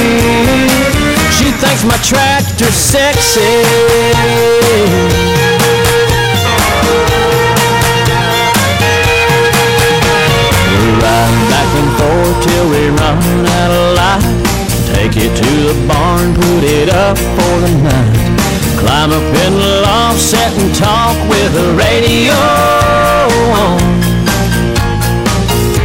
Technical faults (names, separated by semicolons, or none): hard clipping